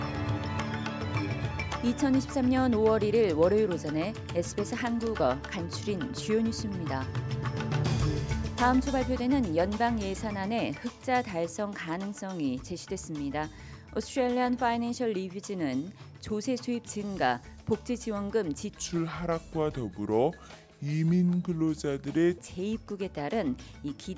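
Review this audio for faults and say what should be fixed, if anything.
From 18.69 to 22.38 s the sound abruptly drags and drops in pitch, running at about 0.73 times normal speed and roughly 5.5 semitones low, so everything in that stretch turns heavy and sluggish. This is a wrong sample rate fault: the samples are clocked out slower than they were captured, with no resampling, so pitch and tempo fall together by the same ratio, which fits 22 kHz material being played back at 16 kHz. To prevent it, carry the true sample rate through the chain and resample explicitly wherever the output rate differs.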